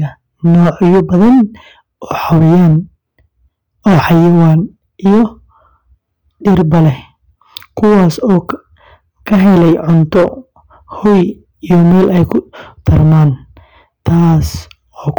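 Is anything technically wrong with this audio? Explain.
Yes. Hard clipping runs throughout: the speech is overdriven by about 9 dB, so roughly a tenth of samples are cut flat, adding harsh fuzz on louder syllables.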